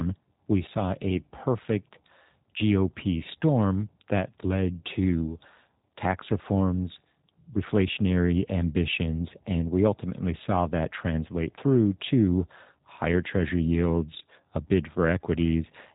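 The clip is speech, and for its whole length it carries the plainly audible sound of the G.729 codec. Nothing reaches above about 3.8 kHz, and the voice has a faintly rough, buzzy, synthetic grain, which fits an 8 kbit/s G.729A stream rebuilding each frame from a vocal-tract filter, a pitch predictor and a few pulses. That grain separates it from plain telephone-band filtering, which narrows the sound but leaves the voice smooth.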